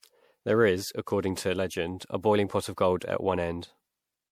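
From start to finish the speech carries generation loss. The sound is swirly and hollow, with a smeared, watery texture. Consonant attacks blur instead of landing cleanly. The damage is worse than a single MP3 pass at about 96 kbit/s would give. The likely cause is repeated lossy coding, around seven rounds. Each decode and re-encode quantised the audio again on a shifted frame grid. Noise and spectral gaps stacked up with every pass.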